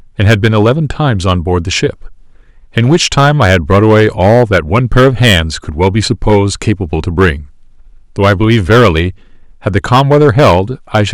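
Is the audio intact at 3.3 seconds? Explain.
No, not really. The speech there is hard clipped, and that runs through the whole clip rather than just that moment. The level is driven about 10 dB past what the stage can pass, so the loudest peaks get sliced flat, roughly a twentieth of the signal. Those squared-off tops throw extra harmonics high up the spectrum, so at 3.3 seconds you hear a harsh, gritty fuzz riding on the louder syllables instead of clean peaks.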